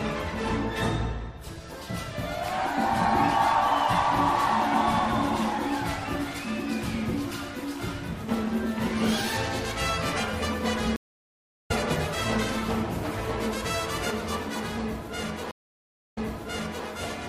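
Throughout, a watery, swirly texture and dulled treble point to MP3 compression, likely at around 64 kbps; a spectrogram shows a hard high-frequency ceiling and flickering spectral holes. From 10.96 to 11.71 s a stream reconnect leaves 735 ms of flat-line silence, and the sound resumes roughly 0.7 s further on. A second reconnect from 15.51 to 16.87 s brings 653 ms of silence, then restarts 705 ms earlier, replaying material already heard.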